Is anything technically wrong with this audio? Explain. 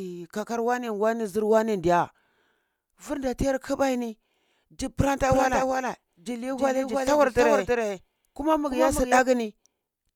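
Yes. A doubled audio track runs from 5.31 s to 9.19 s, right after "kbai ni ji pranta". A second full-band copy of the speech trails the original by roughly 0.3 s, about 5 dB quieter. This is likely from the signal being captured again through a slower path. The copy has no decay or room colour, so each syllable is echoed by a flat, distinct repeat. It switches on and off abruptly at both ends.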